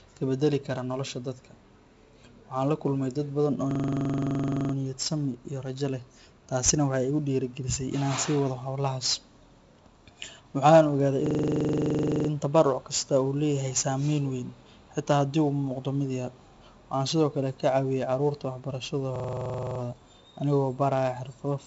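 The whole clip carries 4-bit ADPCM compression. Each sample is coded as a small step from a prediction, so a gritty hiss rides on every loud passage. Sharp attacks distort. Nothing sounds above 7.7 kHz, which fits a 64 kbps stream.

Three system hang loops follow. The first runs from 3.71 to 4.74 s, right after "kulmay dad badan oo". The others run from 11.26 to 12.29 s and from 19.16 to 19.80 s. The hardware replays one 42.67 ms chunk, which fits a 2048-sample buffer. It sounds like a 23.4 Hz machine-gun stutter, repeated 24, 24 and 15 times.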